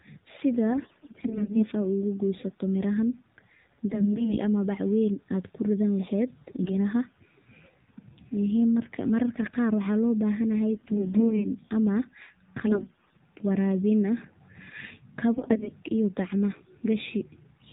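Throughout, the speech carries AMR narrowband mobile codec damage: nothing above 4 kHz, and a buzzy, synthetic edge that fits a low rate around 7.4 kbps. Unlike a plain band-limited telephone line, the voice model itself thins and buzzes the sound. AMR bit errors strike at 0.70–1.64 s, 3.88–4.38 s (before "ama bac weyn"), 6.56–6.75 s (after "kuridan leheed"), 10.72–11.46 s (after "waxaa loo bahan yahay"), 12.68–13.20 s and 15.34–15.72 s. Flipped bits misplace the excitation pulses, so pitch and level hold while the voice turns hoarse and gargly. The sound never drops out, which sets this apart from lost frames.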